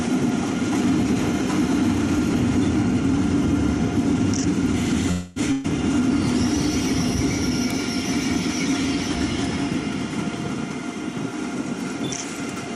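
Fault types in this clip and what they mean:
Call audio freeze: from 5.11 to 5.39 s the sound stalls and is carried on by a fading fill of about 250 ms, likely because packets got held up and the jitter buffer ran dry. Nothing is lost; the audio picks up where it left off, just late.
Burst of packet loss: from 5.52 to 5.67 s about 120 ms goes missing, a few packets dropped or arriving too late. The last sound is stretched and turned down to cover it, then playback jumps ahead past the lost piece.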